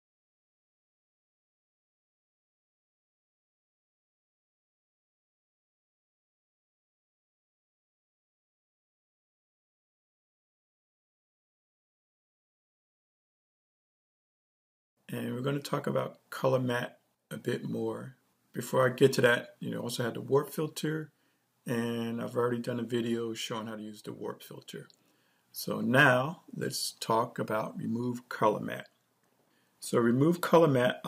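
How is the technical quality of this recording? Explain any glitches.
No glitches or faults detected.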